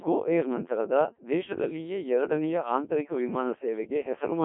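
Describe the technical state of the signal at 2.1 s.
At 2.1 s the speech is still inside the Codec 2 vocoder damage that runs through the whole clip. At 1.3 kbit/s only pitch, voicing, energy and a spectral envelope survive, and the voice is rebuilt from sine waves, so it sounds robotic and buzzy. On a spectrogram that shows as rigid, evenly spaced harmonics confined to roughly 200 Hz to 3.4 kHz, and the waveform looks smoothly synthetic rather than matching the original.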